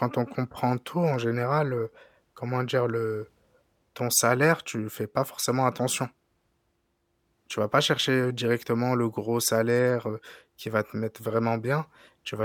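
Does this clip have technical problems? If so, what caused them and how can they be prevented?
No, the speech signal shows no technical faults that can be heard, so there is nothing here that needs a cause traced or a prevention step.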